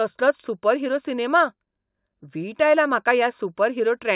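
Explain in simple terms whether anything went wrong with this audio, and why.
Nothing went wrong here: no technical faults can be heard anywhere in the speech.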